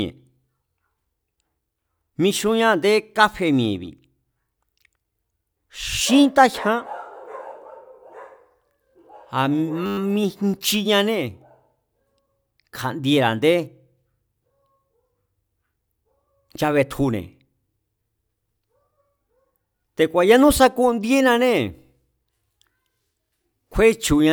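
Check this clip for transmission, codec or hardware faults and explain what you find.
One hardware-side fault is present. A system hang loop runs from 9.86 to 9.98 s: a frozen driver left the device replaying one 10 ms buffer twelve times, producing a steady 100 Hz buzz.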